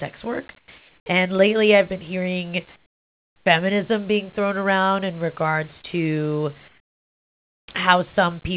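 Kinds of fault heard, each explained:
Sound dropped by the voice detector: at 0.58 s, 100 ms turns into hiss, losing 50 ms of speech, likely because the sender's detector judged it background and stopped sending.
Comfort noise in place of the background: three times the real room background becomes a smooth, featureless hiss about 5 to 14 dB quieter, likely synthetic fill while transmission paused.
Onset clipped by the voice detector: after "lately I've been hearing", speech at 3.4 s starts abruptly, its first 60 ms missing, likely because the detector reacted late.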